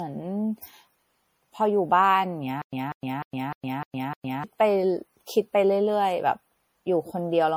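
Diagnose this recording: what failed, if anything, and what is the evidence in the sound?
The speech sounds swirly, hollow and smeared throughout, with blurred attacks. This is likely generation loss at the codec stage, from roughly four MP3 re-encodes at 64 kbit/s.

From 2.62 to 4.44 s, a 193 ms burst repeats six times between 110 ms silences. This stutter with silent gaps is likely a stalled player replaying its last fragment.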